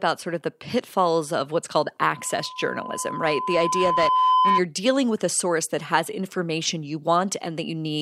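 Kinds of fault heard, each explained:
Loudspeaker feedback squeal: The microphone is picking up the loudspeaker it feeds. At 1 kHz the loop gain exceeds one. After "pitfalls of what's called", a steady tone swells over about two seconds to about 5 dB above the speech. It stops before "dealing with a source".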